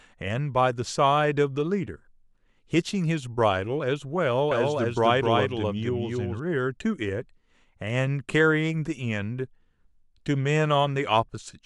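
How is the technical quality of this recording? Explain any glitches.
The recording has one glitch, a doubled audio track from 4.51 to 6.39 s. The speech was likely captured a second time through a slower path and mixed back in, so a dry full-band copy at about equal level trails the original by roughly 300 ms. It starts and stops abruptly, giving a clean echo without room colour.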